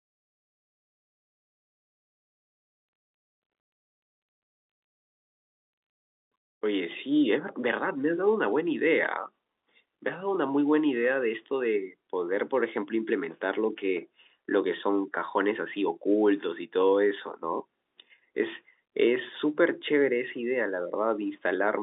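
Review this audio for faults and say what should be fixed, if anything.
Nothing stood out on listening, so there is nothing here that needs fixing.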